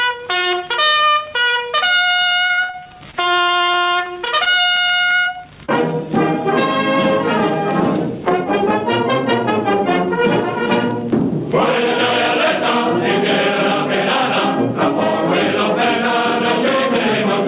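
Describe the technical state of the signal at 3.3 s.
At 3.3 s the signal sits inside a stretch of repeated packet loss (robotic sound) running from 2.46 to 5.70 s. Packets kept failing to arrive in time, and the receiver covered each hole by stretching out the last good audio before the next hole came. About 13% of that span is concealed, with gaps up to 56 ms. Around 0.42 s of audio is patched in and 0.34 s is simply missing, so the sound turns choppy and broken up, with pieces missing.

Gain pumping is also present at this moment. The input gain is most likely set far too high, so a fast limiter clamps down on each loud sound and releases in the pauses. The level swings by about 15 dB. The dynamics are flattened. The audio passes through a narrowband G.711 A-law call path, with nothing above 4 kHz.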